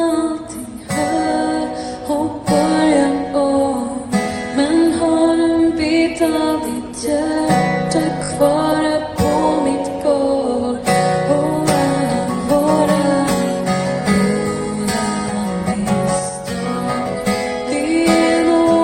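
A brief stutter at 8.23 to 8.30 s, where the same 20 ms slice of sound plays three extra times before moving on. This is repeated frames: compressed frames were written or sent again, so the decoder replays them, lengthening the audio by 60 ms.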